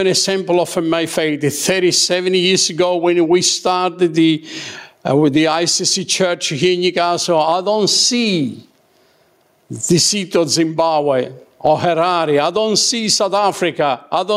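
Right from the start and all the way through this speech clip there's gain pumping, with the level swinging by somewhere around 20 dB. Loud and quiet parts sit squashed close together. The likely cause is input gain set far too high for the mic, with a fast limiter or compressor clamping down on each peak and releasing in the pauses.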